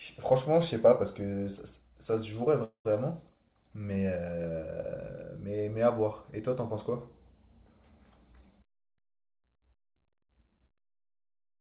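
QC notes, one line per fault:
2.64–2.87 s, call audio freeze: the last sound fades into 0.1 s of silence, then speech resumes intact, 0.21 s late. Likely delayed packets emptying the buffer.
8.58–10.69 s, jitter buffer speed-up: speech runs 10% fast at unchanged pitch and sounds hurried, as tiny pitch-period slices totalling about 0.2 s are cut to shrink delay.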